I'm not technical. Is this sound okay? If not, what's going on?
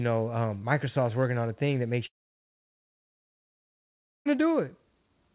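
No. From 2.06 s, right after "a thing that makes", the sound fades into a short buzz or hiss and then goes silent until 4.27 s, losing about 2.2 seconds. This is a long network dropout, likely from the connection failing.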